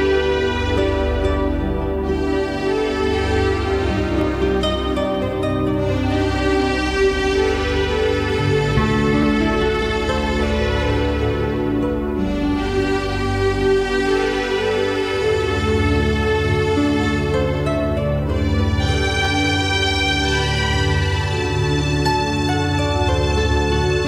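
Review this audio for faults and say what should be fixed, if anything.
Overlapping chunks: each 5 s chunk begins 13 ms before the previous one ends, replaying that slice as a brief stutter at 4.21, 9.23, 14.24 and 19.25 s. To prevent it, advance each chunk by exactly its own length, or trim the duplicated overlap before joining.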